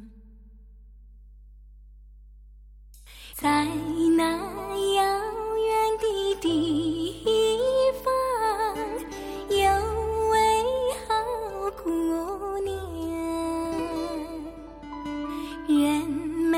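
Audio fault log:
Throughout: mains hum, a steady low 50 Hz drone sitting roughly 25 dB under the sound, with a few low harmonics stacked on top. That points to a ground loop or a transformer close by leaking the power line straight into the signal path.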